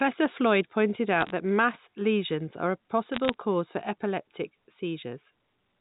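A speech clip carried over a digital phone line, with two short bursts of bit errors. Sharp ticks and crackle sit over the speech from 1.21 to 1.30 s, just before "that mass lesions are". They return from 3.14 to 3.34 s, between "mass lesions are a" and "cause for epileptic". Each flipped bit corrupts one sample, at a rate of a few errors per thousand bits. The band-limited telephone sound of the underlying G.711 coding stays steady throughout.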